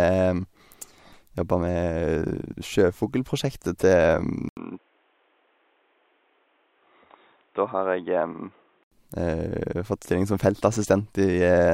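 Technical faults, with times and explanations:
4.49–8.92 s, input switched to a poorer device: after an 80 ms gap, speech turns dull and slightly quieter with nothing above 3.8 kHz and faint new background noise, likely a narrower-band microphone, before clearing again.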